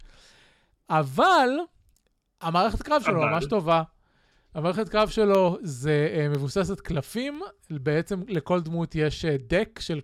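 From 0.35 s to 9.35 s the speech picks up a tick once every second, about ten in all: periodic USB or driver dropouts. Something blocks the audio path on a fixed schedule, and each time a tiny sliver, well under a millisecond, is replaced by silence.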